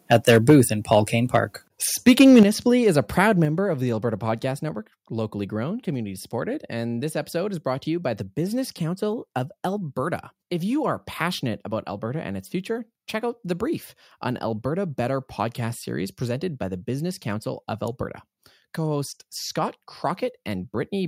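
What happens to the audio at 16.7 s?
At 16.7 s the speech carries on without interruption, and no fault can be heard at that moment.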